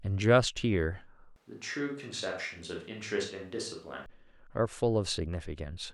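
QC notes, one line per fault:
1.36–4.06 s, switch to a distant microphone: the close microphone's feed likely dropped out, leaving only a pickup much farther from the talker until it cuts back at 4.06 s. With that distance, the speech turns abruptly roomy and hollow, loses body in the low end, and falls about 5 dB in level, while room noise rises to roughly 35 dB below the speech. Both transitions are sudden jumps, not fades.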